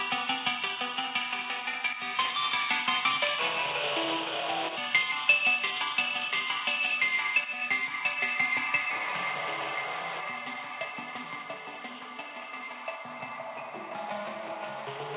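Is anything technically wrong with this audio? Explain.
No, nothing is technically wrong with these sounds. They come through a call path whose narrowband coding leaves nothing above 4 kHz, a limit that fits G.711 mu-law at 64 kbps.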